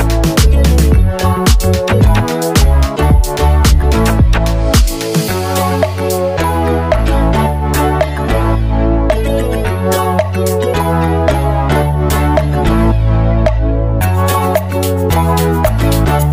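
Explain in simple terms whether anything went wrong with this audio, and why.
Nothing went wrong: no technical faults are audible anywhere in the recording.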